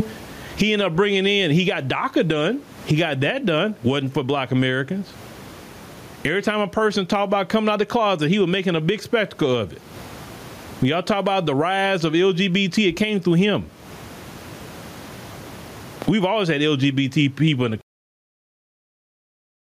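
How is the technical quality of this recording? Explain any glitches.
The recording has two clear problems: the level pumps throughout, and the audio is cut off before the end.

Gain pumping runs through the whole speech recording. The background is room noise sitting about 37 dB below the speech, and the gain swings by around 20 dB. The likely cause is input gain set far too high and a fast limiter or compressor clamping down on every peak. Loud and quiet passages end up squeezed close together. On a waveform, the envelope looks flattened, with peaks held to a similar height and the gaps filled by rising noise. A spectrogram shows the noise floor brightening between phrases and darkening under speech.

The cut-off end comes at 17.81 s. The speech stops mid-sound and drops straight to digital silence with no decay, which points to the final buffers never being written or played back. The result is an abrupt halt, possibly with a click at the cut. 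On the waveform, signal ends in a vertical edge followed by a flat line. On the spectrogram, all energy, including the room noise, vanishes at once, leaving solid black to the end.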